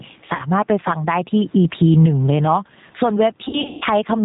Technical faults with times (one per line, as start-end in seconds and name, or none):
0.00-4.25 gain pumping
0.00-4.25 G.729 codec
0.35-0.42 VoIP packet loss concealed by the speech codec
3.45-3.84 VoIP packet loss concealed by the speech codec